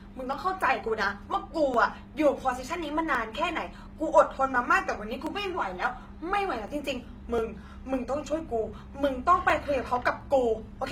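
Speech carries a blend of smeared, swirly and grainy coding artefacts with nothing above 19.5 kHz, likely from transcoding between lossy codecs, consistent with a low-rate HE-AAC stage followed by Opus. Regular clicks recur every 0.70 s from 0.33 s to the end, roughly fifteen in all, pointing to clock drift buffer slips of a few dozen samples each.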